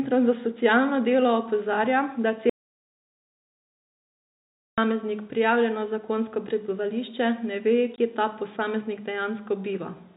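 A speech recording carried over G.711 telephone coding, so nothing above 4 kHz comes through. From 2.50 s to 4.78 s there is an audio dropout to silence. The speech cuts out for about 2.28 s. The gap is silent, with no room tone. What was said there is lost. The likely cause is a lost input, such as a disconnected device or a stray mute, while recording continued. From 7.96 s to 7.98 s, packet loss filled with silence punches a 20 ms hole into the speech. The length fits two 10 ms packets that went missing and were replaced with silence.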